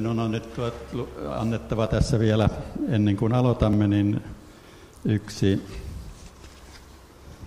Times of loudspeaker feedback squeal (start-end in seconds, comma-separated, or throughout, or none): none